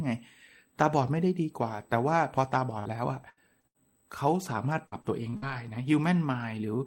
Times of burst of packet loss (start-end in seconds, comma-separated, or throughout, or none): 2.79-2.87, 3.29-3.39, 3.67-3.77